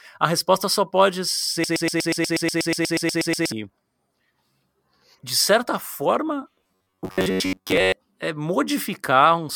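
Just after "resposta só pode", from 1.64 to 3.52 s, a broken-record loop takes over. One 0.12 s fragment repeats exactly, 16 times back to back, most likely because the stream stalled. Each repeat is long enough to hear as the same recognisable sliver of speech, and the speech that belonged there is lost.

After "de certa forma", from 6.55 to 7.92 s, the speech turns into robotic sound from repeated short buffers. A rigid, metallic buzz sits at about 94 Hz, which fits roughly 11 ms of audio being recycled for most of that stretch. The likely cause is audio arriving too slowly. Unlike the loop, this still loosely follows the speech.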